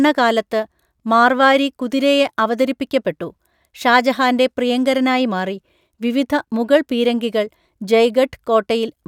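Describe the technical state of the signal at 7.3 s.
Around 7.3 s the signal is intact, with no dropout, clipping, glitch or other fault audible at that point.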